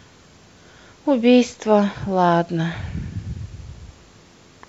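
No technical faults can be heard in the signal at any point in this recording.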